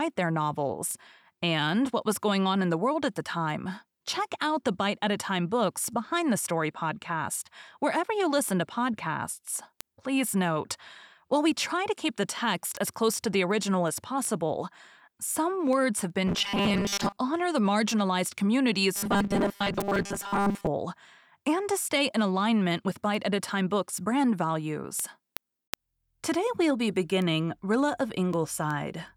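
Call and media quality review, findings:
Word clock ticks, 0.17 to 29.08 s: sharp ticks of uneven strength at a steady rate of roughly one every 0.4 s, around 70 in all. The receiver runs on its own clock, about 50 ppm off the sender's. Each slip drops or repeats one sample.

Robotic sound from repeated short buffers, 16.27 to 17.16 s and 18.96 to 20.67 s: the speech turns into a rigid, metallic 200 Hz buzz. Likely cause is late audio, with the last 5 ms replayed for about 70% of the time while the real audio is skipped.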